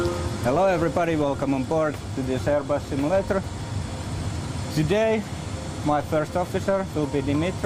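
No audible technical faults occur anywhere in the recording.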